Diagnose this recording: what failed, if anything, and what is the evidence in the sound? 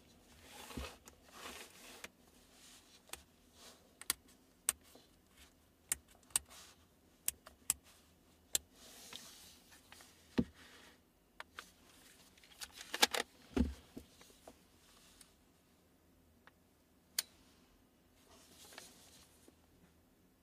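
At 3.9 s the sound jumps forward with no gap of silence. The abrupt splice, with roughly 20 ms missing, points to a likely dropped buffer (overrun) at the driver or buffer stage. The capture side fell behind and the hardware overwrote that block before it was read, so the two surviving edges were joined directly. On the waveform this shows as a sudden discontinuity in level and phase with no flat section. On a spectrogram it appears as a thin vertical broadband line.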